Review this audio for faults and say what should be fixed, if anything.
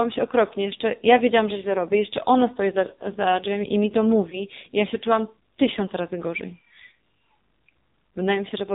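The call path ran the speech through the AMR narrowband mobile codec at a low mode, which fits about 5.9 kbps. Only a handful of pulses per subframe model the excitation, and the 8 kHz sampling removes everything above 4 kHz. The whole recording therefore sounds muffled and heavily buzzy, with a synthetic, thin quality throughout. Prevention: carry the call over a wideband codec such as AMR-WB or EVS, or allow a higher AMR mode when the link permits.

Between 4.30 and 4.42 s there are lost AMR speech frames, right after "drzwiami i mi to" and before "i ja się czułam". A frame failed its radio checksum, and the decoder filled the 20 ms gap by repeating the previous pitch and vocal-tract settings at reduced gain, which fits one lost frame. The result is a brief dip or warble, and the voice returns weak or rough for a moment. Prevention: improve radio coverage or enable stronger channel coding so speech frames arrive intact.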